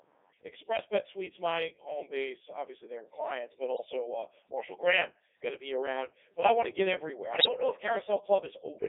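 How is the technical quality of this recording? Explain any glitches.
The recording's technical quality is poor: speech passes through a heavily damaging low-rate vocoder, carries comb filtering from a delayed channel, and breaks up twice from bit errors.

Channel delay (comb filtering) runs throughout. One channel lags the other by around 10 ms before both are summed to mono, so shared content cancels at evenly spaced frequencies, from roughly 50 Hz upward about every 100 Hz. That delay sits at the border between a hollow, phasey colour and a rough, slightly doubled one.

The Codec 2 vocoder also affects the whole clip, at 3.2 kbit/s within a 300 Hz to 3.6 kHz band. It transmits only pitch, voicing, energy and a spectral envelope, and the decoder rebuilds speech from sine waves, discarding the original waveform. The result is heavily robotic and buzzy speech.

Bit errors on digital voice radio strike from 3.74 to 3.86 s and from 7.36 to 7.48 s. 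At an error rate of a few percent, flipped bits corrupt whole vocoder frames, with the second burst spanning more frames. Pitch, level and tone jump abruptly into warbling, bleepy gibberish.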